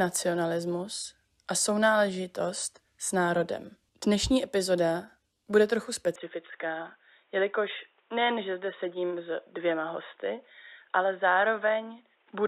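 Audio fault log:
6.16–12.48 s, input switched to a poorer device: the speech suddenly loses everything above 3.8 kHz and turns boxy, with no gap or level jump. A new faint background noise, roughly 40 dB down, points to a likely different microphone rather than simple filtering.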